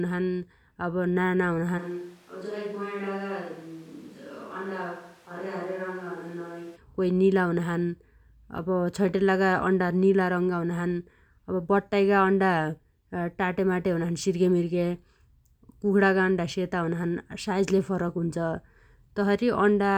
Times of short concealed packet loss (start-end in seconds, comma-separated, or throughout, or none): none